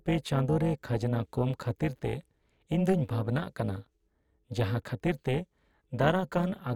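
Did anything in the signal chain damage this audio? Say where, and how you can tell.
Yes. Throughout the speech there is overlap-add ripple, most likely from a frame-based processing stage such as call-processing noise suppression that splits the signal into windowed frames and resynthesises it with windows that don't sum to a constant gain. The level dips and recovers by about 11 dB once per frame, around 400 times a second, giving a buzzy, robotic roughness. Unlike slow gain pumping, the modulation is fast, steady and locked to the frame rate.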